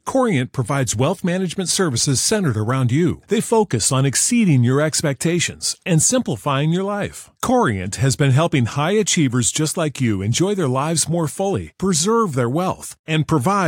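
No technical faults are audible.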